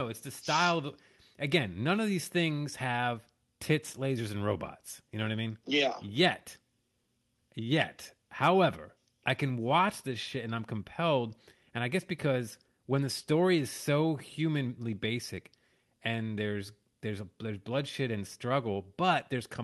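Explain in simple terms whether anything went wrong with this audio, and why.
Nothing went wrong here.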